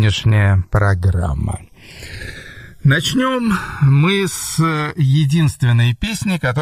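Throughout, the channels are drifting apart: two clocks a couple of hundred ppm off slide the delay to about a millisecond and a half, so mono sounds slowly flanged.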